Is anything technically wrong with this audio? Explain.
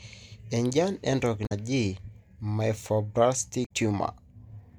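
Yes. Damaged data in the compressed stream, at 1.43–1.52 s and 3.62–3.71 s: corrupt frames make the decoder lose sync, producing a brief chirp, squawk, click or short hole.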